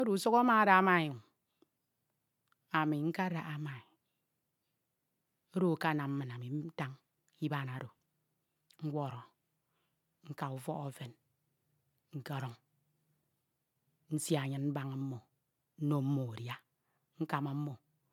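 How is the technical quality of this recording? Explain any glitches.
The quality is degraded by one fault, present throughout the speech. Generation loss is the likely cause: the audio appears to have been MP3-encoded about five times, each pass at a rate consistent with roughly 130 kbit/s and requantising on a shifted frame grid. The result is swirly, hollow, smeared speech with blurred consonant attacks and nothing above 20.1 kHz.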